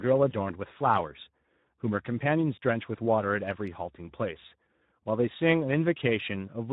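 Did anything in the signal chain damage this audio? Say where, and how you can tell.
Yes. Speex codec damage runs throughout, in the codec stage: the speech sounds plainly hoarse and noisy, which fits a Speex encode around 11 kbps with too few bits for the excitation.

VoIP packet loss concealed by the speech codec, in the network stage, at 0.29–0.36 s, 2.55–2.58 s and 4.47–4.53 s: the decoder stretches its last pitch and filter into a buzzy tone or coloured noise that fades, consistent with one or two lost 20 ms frames each time.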